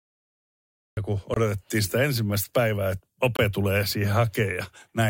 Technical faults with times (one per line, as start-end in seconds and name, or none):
0.00-0.97 cut-off start
1.34-1.36 gap between chunks
3.36-3.39 gap between chunks